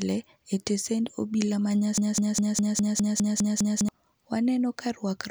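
From 1.98 s to 3.89 s the speech turns into a broken-record loop: one 0.20 s fragment repeats exactly nine times back to back, likely because the player or stream stalled and kept resending its last buffer. The waveform and spectrogram show identical blocks tiled in a row.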